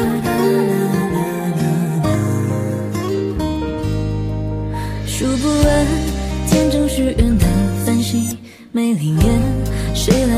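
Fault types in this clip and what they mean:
No technical faults can be heard anywhere in this clip. There is nothing to list under any fault type.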